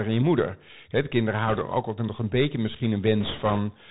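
From start to finish the speech carries the sound of a Bluetooth CVSD headset codec. The narrow, phone-like band that stops near 4 kHz, the scratchy s sounds and the fine granular hiss fit a 64 kbps CVSD stream, where each sample is coded as a single up-or-down step that adapts in size. Plain band-limiting would sound dull but clean. Here the slope-overload grit on loud, bright sounds shows that the codec itself is at work.

From 1.48 to 1.62 s, and again for longer from 3.20 to 3.59 s, come bit errors on a Bluetooth voice link. Each burst sounds like a rushing, crackly wash laid over the speech, consistent with a few percent of bits flipped. Because every CVSD bit shifts the signal only slightly and the error fades quickly, these bursts are not the sharp clicks or dropouts of lost packets.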